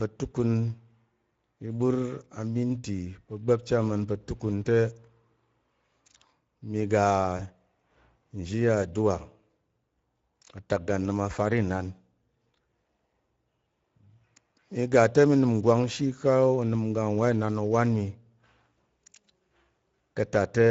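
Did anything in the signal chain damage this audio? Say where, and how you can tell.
Yes, at the codec stage: the Speex codec leaves the speech hoarse and noisy throughout, fitting a mid-rate mode near 17 kbps. The spectrogram shows grainy, smeared harmonics between formants.

Network stage: VoIP packet loss concealed by the speech codec at 7.37–7.41 s, about 20 ms missing, fitting one frame. The spectrogram shows the last sound stretched and fading across the gap.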